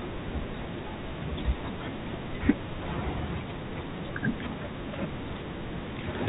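The speech comes through G.711 telephone coding with nothing above 4 kHz and only faint quantisation noise that follows its level, and no technical fault can be heard anywhere in it.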